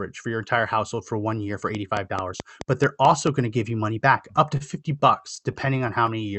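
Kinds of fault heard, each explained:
Train of clicks: from 1.75 to 3.28 s, about seven regular clicks at 4.59 per second tick over the speech, roughly 15 dB above it, likely interference from nearby equipment.
Short stall from a late packet: at 4.57 s a late packet emptied the jitter buffer, so the last sound is held 30 ms before continuing, nothing lost.
Repeated stalls (stutter): from 5.00 to 6.09 s packets kept arriving late, and nine brief hold-overs, none longer than 15 ms, make the speech drag and stutter.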